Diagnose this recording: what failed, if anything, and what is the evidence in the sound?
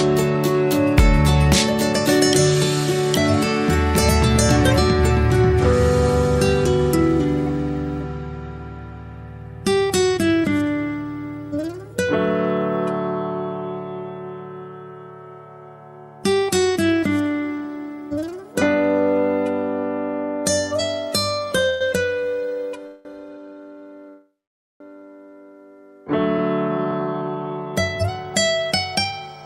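Three call audio freezes hit the network and buffer stage, at 21.69 to 21.83 s, 22.87 to 23.07 s, and 24.09 to 24.82 s. Each holds the last sound as a fading buzz; the third goes fully silent for about 0.5 s. The audio resumes intact, just later, so packets were likely held up and the jitter buffer ran dry.

Right after that, from 26.38 to 29.43 s, there's a jitter buffer speed-up. The audio runs at about 114% with unchanged pitch and sounds rushed. The receiver trimmed tiny pitch-period slices, roughly 0.4 s in total, to drain the backlog those late packets built up.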